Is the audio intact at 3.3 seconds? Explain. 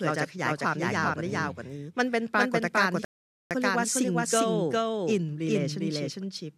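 No. At 3.3 seconds the speech falls within a rebuffering stall from 3.05 to 3.51 s, where the sound cuts to silence for about 0.46 s. The player ran out of downloaded audio and waited for more. Unlike a dropout, which deletes a piece of the signal, the speech picks up exactly where it broke off, so nothing is missing and the clip simply runs longer by that gap.

The same moment is also affected by a doubled audio track that runs through the whole clip. A second copy of the speech trails the first by roughly 400 ms and is about as loud as the original. The likely cause is the audio being captured a second time by a slower path, or two copies held out of step. This is not room echo or reverb, because the trailing copy keeps the full frequency range and never decays or takes on any room colour.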